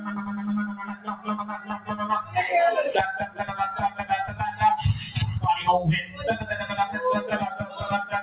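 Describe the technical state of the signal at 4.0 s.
At 4.0 s the sound sits inside a brief dip from 3.9 to 4.05 s. This is sound cut by the noise suppressor. The suppressor judged this stretch to be noise and pulled it down harder than its surroundings, by about 10 dB at the deepest point. For roughly 150 ms the level sinks and the sound thins. Any sustained or decaying part loses body here. A sudden onset would come through more intact.

That dip belongs to a wider fault: a noise suppressor applied to music or sounds. A suppressor built for speech is active across the whole clip. It treats steady tones, ambience and reverb tails as noise. Its gain swings by around 10 dB as it decides what to keep. Attacks pass, but held sound and decays are squeezed. The result is pumping and a thinned, fluttering texture. The band also stops near 4 kHz, which fits a G.711 call codec.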